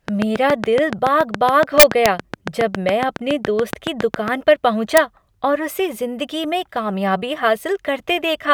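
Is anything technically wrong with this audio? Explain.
Yes. A train of clicks runs from 0.08 to 4.29 s: roughly thirty evenly spaced pops, about 7.2 per second, well above the speech, likely from electrical interference or a faulty connection.

Integer overflow occurs at 1.80–2.06 s and at 4.97 s, just before "और उसे ज़िंदगी में". Peaks reaching the limit (about 1 dB and 0 dB over) wrap to the opposite sign, producing harsh cracks.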